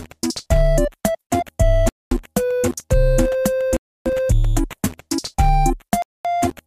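Bluetooth stalls at 1.89 to 2.11 s, 3.77 to 4.06 s and 6.02 to 6.25 s cut the sound to complete silence for 224 ms, 292 ms and 224 ms, then playback resumes. The likely cause is radio interference delaying packets over the wireless link, so the headphones' small buffer empties and output halts until retransmitted data arrives. Each gap is heard as an abrupt dropout.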